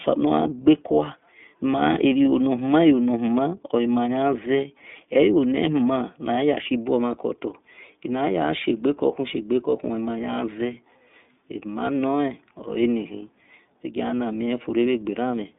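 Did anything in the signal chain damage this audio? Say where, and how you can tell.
Yes, at the codec: iLBC coding throughout cuts everything above 3.8 kHz, and independently coded 30 ms frames leave the speech plainly rough and synthetic.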